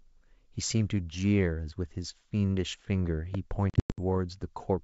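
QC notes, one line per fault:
3.35–3.37 s, loud pop: A sudden voltage step, likely from a plug, switch or static discharge, was added to the signal and shaped by the circuitry after it. A single sharp pop rises roughly 10 dB above the speech, which carries on underneath.
3.70–3.99 s, packet loss on an ADPCM call: Lost packets on this 64 kbit/s G.722 call became silence, 220 ms in all, scattered over 280 ms, with a longest gap of 100 ms. These are hard-edged holes, and the decoder's predictor falls out of step, so the speech returns disturbed before settling.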